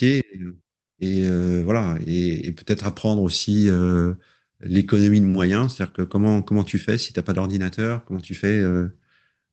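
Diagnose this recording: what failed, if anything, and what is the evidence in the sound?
Nothing failed in this recording, and no stage in the chain shows a fault. The speech has passed through a call codec and jitter buffer working as intended, with its high end stopping at 8 kHz, which fits Opus running in wideband mode.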